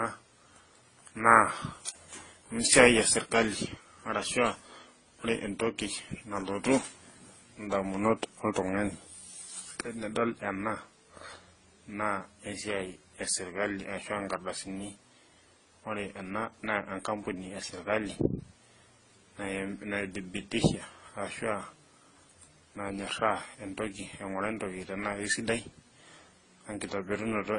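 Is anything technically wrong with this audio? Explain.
Yes. Throughout the speech, nothing is heard above 10 kHz, and several kinds of coding damage sit on top of one another, each codec's artefacts heard together. That points to a likely chain of transcoding between lossy codecs, fitting roughly Opus at 16 kbit/s, then MP3 at 48 kbit/s, then AAC-LC at 24 kbit/s. Each later encoder spends its bits on the previous encoder's errors and adds its own, and the lowest cut-off stays. What separates this from a single low-bitrate encode is the mix of artefact types heard together.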